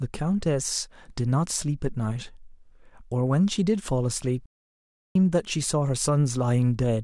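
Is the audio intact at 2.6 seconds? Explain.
Yes, the audio is intact at 2.6 seconds, with no audible fault at that moment.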